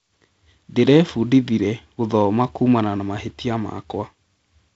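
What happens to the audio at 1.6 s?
Nothing goes wrong at 1.6 s: the speech carries on intact through that moment, with only the G.722 wideband telephone coding shaping it, keeping the band up to about 7.7 kHz and adding a light hiss in the upper band, while the 48 kbit/s rate leaves the lower band a little noisier.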